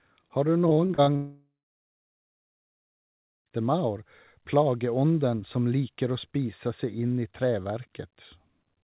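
From 0.68 to 1.10 s the speech turns choppy, with short pieces dropping out. This is repeated packet loss: five separate gaps, the longest about 31 ms, each patched by stretching the preceding sound before the next hole arrives. Roughly a third of that span, about 150 ms in total, is concealment rather than real audio, which gives it the choppy texture.

Almost immediately after, from 1.16 to 3.49 s, the sound smears into a brief fading buzz or hiss and then goes quiet for about 1.97 s before speech resumes further on, with the intervening 2.3 s simply gone. This points to a long network dropout as the likely cause: nothing reached the receiver, it extended the last sound until that decayed, and playback picked up later without recovering the lost stretch. Through all of this the audio carries the narrow, telephone-like band of the call codec, with nothing above 4 kHz.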